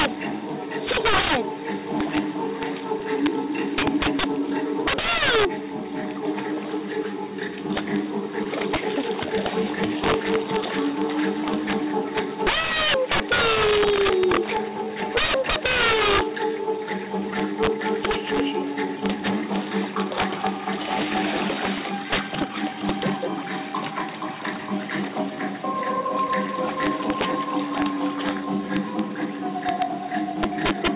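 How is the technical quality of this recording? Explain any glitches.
The quality is poor. Loud passages crack harshly, and timing stutters slightly throughout. The audio is band-limited to 4 kHz, consistent with G.711 A-law at 64 kbps.

Integer overflow runs through the whole clip. The level is driven about 12 dB too hot, so a few percent of samples wrap to the opposite sign. Each one produces a violent crack.

Clock drift between sender and receiver is also present throughout. The sender's clock runs roughly 2% slow, so the receiver's buffer keeps draining.

Repeated timing corrections run from 0.51 to 30.49 s. The receiver repeats short pieces, playing at 98% speed overall. This adds about half a second.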